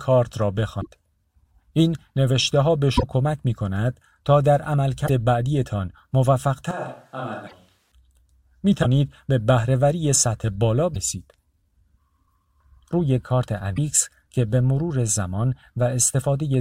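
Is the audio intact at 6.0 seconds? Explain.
Yes, the speech at 6.0 seconds plays through cleanly, with no dropout, click, distortion or other fault at that point.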